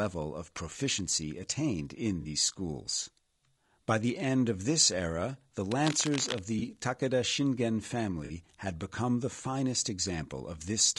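Throughout the speech there is a rough, grainy texture, with noise filling the gaps between the pitch harmonics and an upper band that sounds thin and synthetic. This is the signature of low-delay AAC compression, likely AAC-ELD at a low rate, consistent with around 32 kbps. Its short transform frames cannot separate closely spaced harmonics well, and the limited bits leave the high band roughly reconstructed rather than coded in detail.

At 2.21–2.27 s, right after "of proficiency attained in", the speech smears into a brief noisy, phasey patch. This is AAC frame loss with concealment. The decoder lost data and rebuilt the gap from the last good spectrum, and the length fits two dropped 20 ms frames. The same fault recurs at 6.59–6.62 s as a shorter blur, fitting a single lost frame. It happens again at 8.25–8.31 s, just before "had become the finest", which again fits two frames. None of the gaps lasts long enough to decay into silence.

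From 5.70 to 6.40 s, following "of this era the", a burst of dense, uneven scratching and rustling sits over the speech at about 10 dB below it. This is cable scratch noise, likely from a worn cable, connector or control being moved. The shifting contact resistance modulates the signal path erratically and injects those irregular noise bursts for as long as the contact is disturbed.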